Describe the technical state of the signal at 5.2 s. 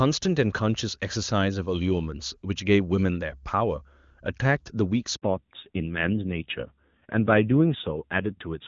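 Right at 5.2 s there's a handover gap: from 5.16 to 5.22 s the sound cuts out for about 60 ms. While the call switches networks, no speech frames get through, so the audio falls away almost instantly and stays dead until the new link picks up.

Straight after, from 5.22 s to the end, you get a fallback to narrowband. Nothing above 4 kHz survives, so the speech goes dull and rougher. That fits a drop from HD Voice AMR-WB at 23.85 kbit/s to AMR-NB at 7.4 kbit/s.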